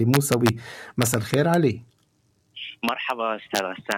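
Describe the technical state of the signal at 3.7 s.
Violent, sharp cracks burst through the loud peaks, harsher than clipping. This is integer overflow from 3.55 to 3.92 s: pushed about 1 dB past full scale, each peak wraps to the opposite sign.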